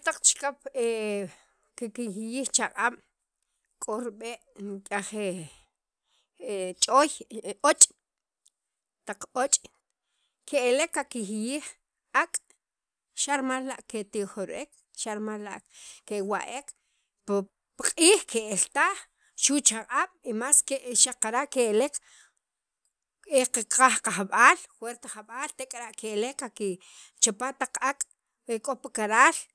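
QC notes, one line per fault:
Nothing stood out on a careful listen through the recording.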